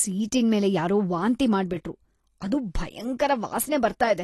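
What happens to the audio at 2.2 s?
At 2.2 s the speech is still carrying the AAC compression damage present across the whole clip, likely from AAC-LC encoding at a low bitrate, which fits about 32 kbps. Short of bits, the encoder discards everything above about 12.3 kHz and quantises the remaining spectrum coarsely, leaving gaps. The speech sounds dull and smeared, with a warbling, fizzy edge on sustained sounds and sibilants that is plainly audible.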